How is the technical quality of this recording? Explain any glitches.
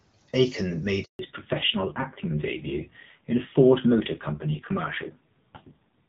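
The recording has two linked faults around the 1 s mark: a brief dropout and then a lasting loss of bandwidth that dulls the rest of the speech.

From 1.03 to 1.19 s there is a handover gap of 160 ms. The call was being passed from one network link to another, and no speech frames arrived while the switch happened. The speech fades out within a few tens of milliseconds and stays silent until the new link starts carrying audio. On a waveform this shows as a flat, silent stretch. On a spectrogram it is a clean vertical band of black across all frequencies.

From 1.19 s to the end there is a fallback to narrowband. Before the gap the speech is carried in wideband HD Voice, which sounds clear. When the call resumes, it has dropped to an older narrowband codec, and the sound points to a low rate of about 5.9 kbit/s. Nothing above 4 kHz survives, so sibilants lose their crispness and the speech sounds muffled, boxy and rougher. 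On a spectrogram the energy above 4 kHz stops abruptly at 1.19 s, leaving a hard horizontal ceiling for the rest of the clip.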